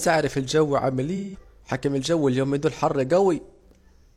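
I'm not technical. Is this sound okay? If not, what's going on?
No. The speech has two short dropouts from AAC frame loss with concealment. Small chunks of the compressed audio went missing. The player covered each gap by stretching out the last sound it had. The first gap runs from 1.16 to 1.39 s, after "اعرف الجو عامل" and before "حكم اليومين دول الجو". The second runs from 3.47 to 3.62 s, after "اليومين دول الجو حر". Each sounds like a brief smeared, noisy blur.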